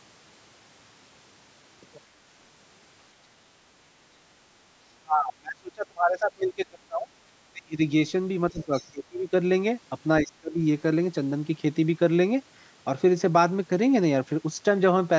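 Speech suppressed in double talk first appears from 4.94 to 7.15 s, then at 7.52 to 7.82 s and 8.51 to 8.72 s. The speech sinks by up to about 30 dB, likely because the echo canceller could not separate the talker from loudspeaker echo while both sides spoke, so it attenuated everything.

Other side's voice leaking through follows at 8.61 to 8.88 s. A faint second voice, about 25 dB below the speech, slips past, likely because residual loudspeaker pickup was not fully cancelled at the microphone.

The suppression returns at 8.91 to 9.33 s and 10.22 to 10.6 s, with dips of about 25 dB.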